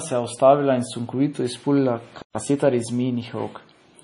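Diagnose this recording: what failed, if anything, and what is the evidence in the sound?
The whole speech track is dull and watery. Nothing is present above 10.6 kHz, so the top of the spectrum is simply missing. S sounds come out swirly and metallic, and consonant attacks smear. This is likely MP3 compression at the codec stage. The damage is heavy and points to a low bitrate, something like 32 kbps. Short of bits, the encoder cuts the treble at a fixed point and drops weak frequency lines. Those lines flicker on and off between frames.

At 2.22 s the sound stops mid-flow. It stays silent until 2.35 s, a gap of about 128 ms. It then resumes. This is a playback stall at the driver or buffer stage. The likely cause is that the player ran out of data or its thread was blocked. With nothing to send, the output fell silent. It returned once data was available again.

Right after the gap, from 2.35 to 2.59 s, the speech is hurried. 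It runs at 1.5 times normal speed, but the pitch stays normal. This is time-compressed catch-up in the playback stage. To clear the backlog from the stall, the player removes small slices of audio and cross-fades the joins. That shortens the delay without raising the pitch.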